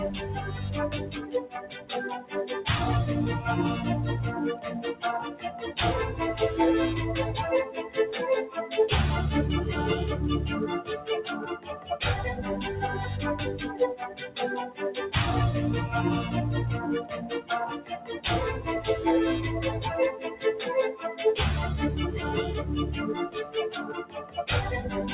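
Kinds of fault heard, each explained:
Noise suppressor applied to music or sounds: a speech-tuned suppressor stayed active throughout, treating steady content as noise, so levels swing by around 10 dB and pump.
Sound cut by the noise suppressor: the suppressor mistook sustained passages for noise and pulled them down about 11 to 13 dB, in eight dips of up to a second.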